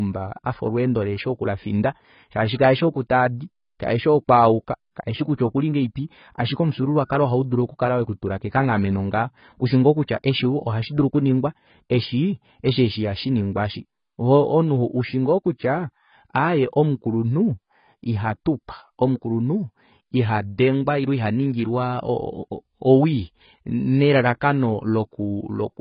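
From start to finish the speech is dull and band-limited, with nothing above 5.1 kHz, a swirling, watery smear on vowels and a fizzy edge on sibilants. This is heavy damage from AAC compression, likely AAC-LC at a very low bitrate, consistent with about 16 kbps, where the encoder drops the top band and coarsely quantises the rest. A spectrogram shows a hard ceiling at 5.1 kHz.

From 7.05 to 7.10 s a short hiss runs ahead of a sharp onset, and the attack itself sounds softened. This is pre-echo. The codec spread quantisation noise across the whole transform block, so noise meant to sit under the loud attack also fills the quiet 52 ms before it. On a waveform a low, grainy smear precedes the transient. On a spectrogram a broadband haze appears just before the onset's vertical edge.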